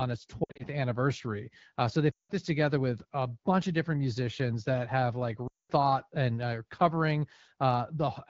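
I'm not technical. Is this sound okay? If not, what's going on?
No. The audio has three short dropouts caused by lost AMR speech frames. Radio errors corrupted small chunks of the call, and the phone's decoder filled each gap by repeating the last good sound while fading it out. From 0.43 to 0.64 s the losses are scattered, so the sound briefly warbles. At 2.12 to 2.32 s, just before "this together with a", and at 5.47 to 5.72 s, between "musicians that have like" and "and are covering", longer runs quickly drop to near silence.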